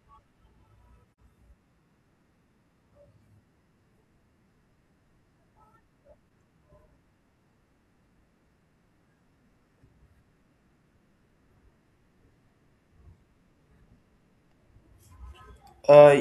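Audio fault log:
1.14 s and 6.25–6.29 s: AAC frame loss with muting. The sound drops out in a soft-edged gap of about 85 ms at 1.14 s and dips briefly for about 43 ms at 6.25 s, which fits two lost AAC frames and then one. The decoder zeroes the spectrum for the missing frames, and the overlapping transform windows fade the speech down into the hole and back up out of it.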